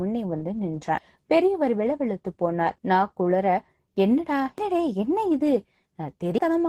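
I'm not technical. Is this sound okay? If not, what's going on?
No. The speech was squeezed by Opus voice compression, which throws away detail to make the file small. Here it removed enough that the damage is plainly audible throughout: the speech sounds rough and hoarse, with a somewhat synthetic, robotic edge.

There is also likely audio missing between chunks. The recorder seems to have lost a moment each time it switched pieces. At 0.98, 4.58 and 6.38 seconds, roughly a fifth of a second vanishes and the sound skips abruptly forward.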